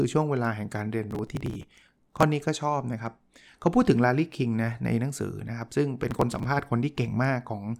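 From 1.11 to 2.23 s the speech breaks into processor overload crackle, a gritty tearing over the sound. The processor is missing its deadlines for buffers of roughly 3 ms, and dozens are skipped. Each skip leaves a hard-edged gap. The same crackle returns, shorter, from 6.11 to 6.44 s.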